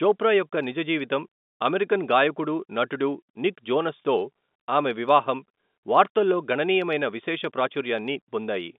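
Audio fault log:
No faults are audible anywhere in this speech.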